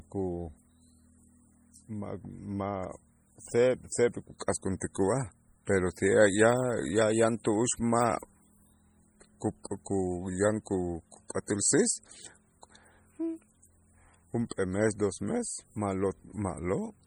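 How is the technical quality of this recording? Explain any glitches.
The recording is heavily damaged by lossy encoding, with one audible pre-echo.

MP3 compression, throughout: a likely cause is a starved MP3 encoder, consistent with roughly 32 kbps, zeroing weak frequency lines frame to frame, giving heavy watery, swirling artefacts and metallic chirps on sibilants.

Pre-echo at 4.80 s: the codec spread its quantisation noise across a block, so a brief hiss about 15 ms long precedes a sharp attack, which sounds smeared.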